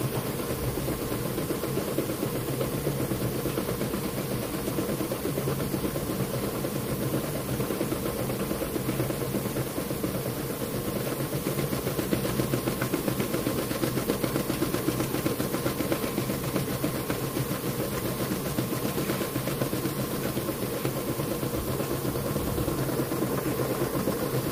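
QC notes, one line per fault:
Nothing to flag here: the sounds come across with no technical faults to note.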